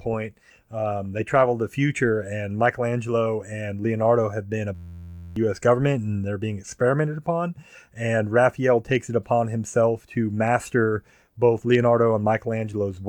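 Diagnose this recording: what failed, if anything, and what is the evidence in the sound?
A system hang loop at the driver or buffer stage: right after "have been", from 4.75 to 5.36 s, the speech freezes into a steady buzz at about 86 Hz. That's one 11.61 ms chunk replaying, which fits a 512-sample ring buffer, and roughly 0.7 s of audio is lost.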